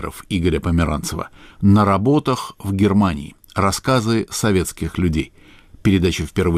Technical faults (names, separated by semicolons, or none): clock drift between sender and receiver; repeated timing corrections